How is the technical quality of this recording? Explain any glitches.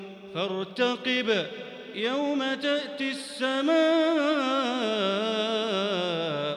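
Nothing stood out on listening that would count as a glitch or a technical problem in this recording.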